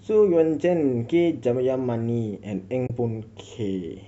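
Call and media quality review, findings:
AAC frame loss with muting, 2.87 to 2.90 s: a soft-edged dropout of about 30 ms, consistent with roughly three lost 10 ms frames zeroed by the decoder and smoothed by overlapping windows. Waveform shows a brief tapered gap; spectrogram a thin vertical blank band across all frequencies. Light coding damage in the surrounding audio, likely from low-delay AAC coding.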